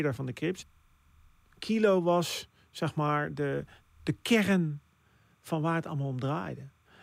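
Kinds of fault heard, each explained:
Timecode bleed: Linear timecode from a nearby track or cable has leaked into the recording. Its square wave flips between pitches near 1 and 2 kHz, coded at 30 frames per second. A faint, steady chirping warble sits far below the speech throughout.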